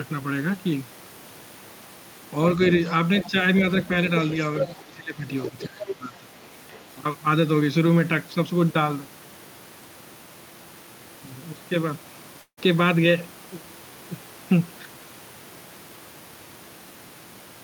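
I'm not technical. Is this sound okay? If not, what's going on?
No, there are three problems.

Around 3.23, 3.75, 4.4 to 4.85, 5.37 to 5.92 and 6.69 s, scraps of a second voice come through. That's the other side's voice leaking through, likely from this side's loudspeaker getting picked up again.

From 4.76 to 5.24 s and 5.51 to 6.31 s, the main voice dips while that other voice overlaps. That's speech suppressed in double talk, likely the echo canceller turning everything down at once.

At 12.41 to 12.59 s there's a long network dropout. About a sixth of a second goes missing, covered by a brief fading buzz and then silence.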